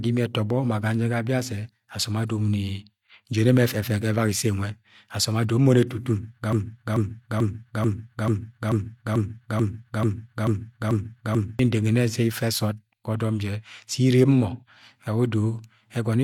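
At 6.53 s the playback chain stalls, most likely a player or stream that stopped receiving new data and kept resending the last fragment in its buffer. The result is a broken-record loop in the speech: a 0.44 s slice repeats exactly, back to back, twelve times until 11.59 s, giving a rigid stuttering rhythm with identical pitch and timing on every pass. Whatever speech should have filled those five seconds is gone.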